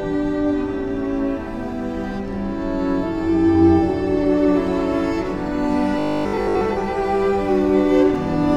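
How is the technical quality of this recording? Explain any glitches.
One glitch stands out. From 5.99 to 6.61 s the sound turns into a rigid, metallic buzz pitched at 50 Hz. This is robotic sound from repeated short buffers, likely caused by audio arriving too slowly so that a roughly 20 ms chunk is looped over most of that stretch and the real audio is skipped.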